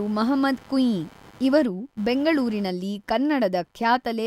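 Shifting load on the computer's processor, graphics or mouse disturbs the audio circuit's shared ground, causing computer activity noise throughout: a chirping buzz pulsing around a hundred times a second, roughly 30 dB below the speech, following the machine's activity rather than the talking.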